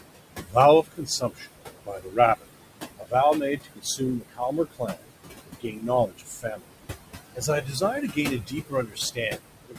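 Noise suppressor artifacts run through the whole clip. The room noise sits only about 9 dB below the speech. The suppressor pulls it down by about 20 dB. What remains sinks between words and rises under them.

Speech cut by the noise suppressor happens six times: 0.38–1.5 s, 1.86–2.63 s, 2.98–3.14 s, 3.57–5.13 s, 5.45–6.66 s, and 7.35 s to the end. The suppressor mistakes parts of the speech for noise and drops them by about 20 to 22 dB. Each cut lasts up to about a second. Those parts sound swallowed and faint.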